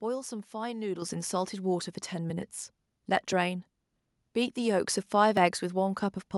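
Periodic USB or driver dropouts begin at about 0.25 s and continue to about 5.37 s. At an interval of 1.02 s, something stalls the USB bus or audio driver, and each stall discards about two milliseconds of audio. The samples are skipped rather than filled with silence, so the waveform jumps straight across the gap. The result is a series of roughly seven evenly spaced ticks riding on the speech.

At 1.02 s, the microphone volume is stepped up: the call software judges the input too quiet and raises the device's input gain by about 8 dB in a single step. The speech and the background noise behind it jump louder together at that instant, with no gradual ramp.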